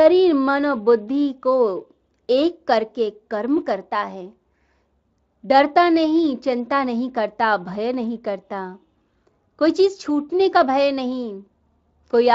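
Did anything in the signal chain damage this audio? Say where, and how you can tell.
No, nothing in the chain damaged this speech.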